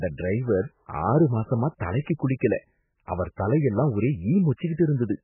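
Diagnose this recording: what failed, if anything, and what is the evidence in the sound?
MP3 compression, throughout the speech: a hard ceiling at 3 kHz and a watery, swirling texture point to the codec stage, likely an encoder starved of bits, which fits roughly 8 kbps. With so little budget, the encoder discards the treble and drops weak frequency lines frame by frame, so the damage is heavy.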